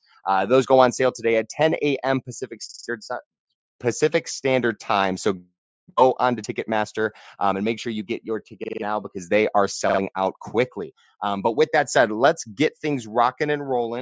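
Repeated buffer stutters at 2.69–2.88 s, 8.64–8.82 s and 9.89–9.99 s: a 46 ms piece, fitting a 2048-sample buffer, replays with hard joins when fresh audio arrives late.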